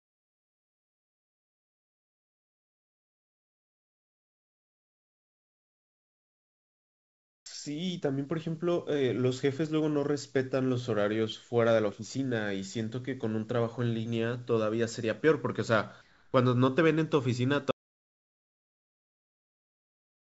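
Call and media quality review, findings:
Flat, featureless hiss in place of the room background, 0 to 7.46 s, about 27 dB quieter; again 16.02 to 16.34 s, about 4 dB down. Comfort noise in place of the background, likely from discontinuous transmission during pauses.

Drawn-out stretch at unchanged pitch, 7.48 to 7.73 s, running at 85% speed with 43 ms added. Jitter buffer slow-down: repeated pitch periods to rebuild reserve.

Hurried stretch at unchanged pitch, 8.00 to 8.43 s, 108% speed, about 50 ms removed. Jitter buffer speed-up: pitch periods cut to shed excess delay.

Sound cuts to complete silence with no room tone at 17.71 s, lasting to the end. Audio dropout to silence, likely lost input with silence written.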